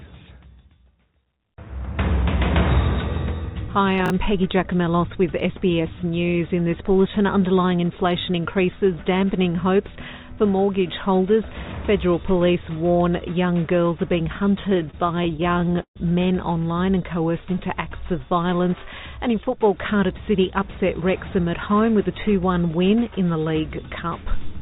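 Audio carried over a narrowband call path, with nothing above 4 kHz, which fits G.711 A-law at 64 kbps. At 4.06 s, two 20 ms chunks are out of order, with one arriving a chunk late and playing after its successor. The result is a brief jumbled flick at the hard joins. Nothing is missing or repeated, which sets it apart from a dropout or a skip. From 14.7 to 15.98 s, repeated stalls (stutter) appear as 21 separate gaps, likely from packets arriving late. The receiver stretched the last sound to fill 344 ms in total, about 27% of that span, and the longest gap was 142 ms. No audio is lost, unlike packet loss; it drags and hiccups instead. From 19.16 to 21.02 s, a jitter buffer speed-up runs the audio about 4% fast at unchanged pitch as the receiver trims short pitch-period pieces, roughly 70 ms in all, to reduce excess delay.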